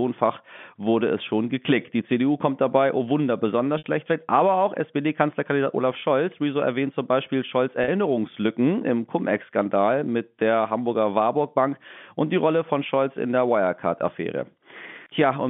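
Speech on a telephone-band line, with three short buzzy holds where the voice sticks on a single pitch: 3.78–3.84 s (60 ms), 6.00–6.02 s (20 ms) and 7.84–7.88 s (40 ms). This is packet loss with pitch repetition. The receiver replays the last pitch cycle to cover each gap, which fits lost 20 ms packets.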